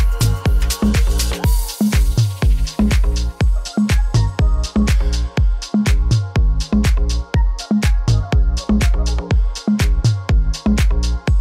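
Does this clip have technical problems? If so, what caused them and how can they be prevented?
No, the signal holds steady throughout, with no technical faults to diagnose and nothing in its recording or transmission that needs preventing.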